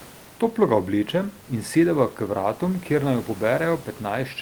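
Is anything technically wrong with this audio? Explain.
No, nothing here is a system fault; the faint room noise sits about 25 dB below the speech and belongs to the recording space.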